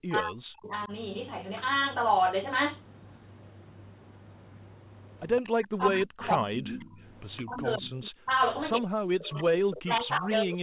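From 0.05 to 0.92 s the speech dips, falling by up to about 40 dB over roughly 0.7 s, likely speech suppressed in double talk: with both sides talking, the echo canceller turned down its own talker along with the echo. Inside that stretch, at 0.72 s, a faint delayed copy of the voice appears about 25 dB down, trailing by 164 ms. This is likely an echo leak, where far-end loudspeaker sound got past the canceller and was sent back. It returns at 5.38 s, about 20 dB below the speech. From 5.47 s to the end, the same suppression recurs, with drops as deep as about 40 dB. Through it the echo leaks again at 6.23 to 6.77 s, 7.36 to 7.57 s and 9.71 s, still 164 ms late and 15 to 20 dB below. The audio is band-limited to 4 kHz by the G.711 mu-law call path.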